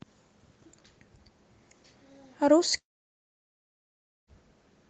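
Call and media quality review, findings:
Long network dropout, 2.77–4.30 s: short fading buzz from concealment, then about 1.4 s of near-silence. Resumes with content skipped, not time-stretched. Likely a sustained packet-stream interruption, not brief loss.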